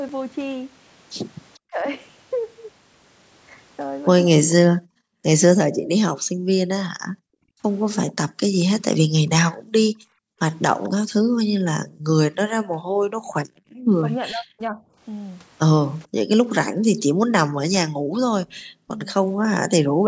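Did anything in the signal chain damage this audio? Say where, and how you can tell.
Yes. From 1.54 to 4.54 s and again from 8.09 to 10.89 s, a faint delayed copy of the speech trails the original by about 442 ms, sitting roughly 25 dB below it. The stage is call processing: this is an echo leak, likely from a far end playing the call over a loudspeaker whose echo canceller left part of the microphone pickup in place and sent it back.

The speech itself dips sharply in short pieces at 1.68 to 1.86 s and 7.18 to 7.51 s. Across 11.62 to 19.06 s it is repeatedly pulled down, for about a second and a half in all, with drops of around 40 dB. That pattern is speech suppressed in double talk, likely because the echo canceller could not separate the local talker from the loudspeaker echo while both sides spoke, so it attenuated everything.

The room background also vanishes in bursts, falling by about 40 dB and then returning. 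This happens across 4.75 to 10.39 s (about two seconds of it gated in total), at 13.44 to 13.92 s, and at 17.91 to 20.07 s. This is background gated by the echo canceller: while loudspeaker output was present, the same call-processing stage clamped the microphone hard and released it once the canceller let go. The band-limit near 8 kHz from the call's microphone processing is expected and not a fault.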